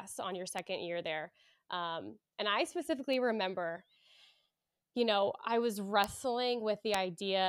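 Speech with four bit error spikes, each a single sharp tick that is broadband and unrelated to the talker. They fall at 0.59 s, between "on your" and "year there"; at 3.13 s after "and I"; at 6.04 s after "you know I was"; and at 6.94 s. Peaks reach about -23, -30, -11 and -11 dBFS. Each is a flipped bit throwing one to three samples by a power of two before snapping back.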